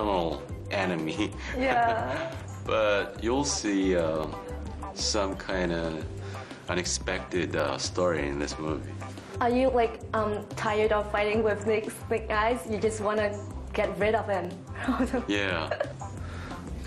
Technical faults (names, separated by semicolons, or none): dropped samples